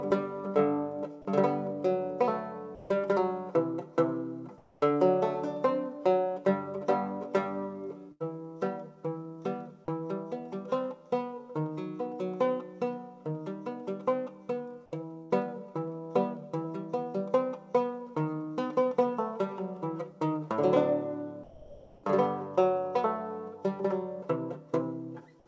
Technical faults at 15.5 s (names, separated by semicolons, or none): burst of packet loss